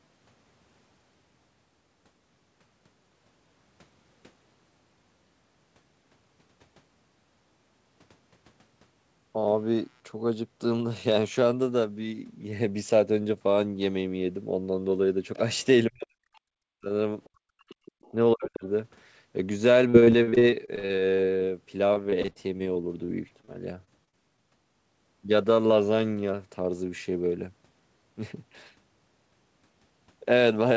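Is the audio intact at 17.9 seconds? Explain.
No. From 17.47 to 18.64 s the speech is suppressed in double talk: the level dips by roughly 40 dB in pieces, likely because the echo canceller mistook simultaneous talk for echo, unlike a dropout's clean silence. From 17.7 to 18.11 s the other side's voice leaks through faintly, about 35 dB below the speech, likely residual loudspeaker echo rather than background chatter.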